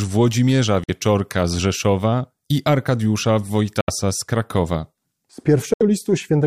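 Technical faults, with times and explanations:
0.84–0.90 s, 3.81–3.90 s and 5.74–5.83 s, Bluetooth dropout: the speech cuts to silence three times, for roughly 60 to 90 ms each, then resumes further along as if it had kept playing. The gaps fit two or three lost audio packets, likely dropped on the wireless link before reaching the headphones. A waveform shows flat silent holes with abrupt or briefly faded edges. A spectrogram shows blank vertical bands across all frequencies.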